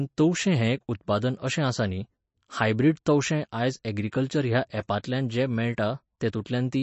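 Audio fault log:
Throughout, MP3 compression: sound stops at 8 kHz with a watery swirl, likely a starved encoder near 35 kbps; the swirl rules out low-pass filtering.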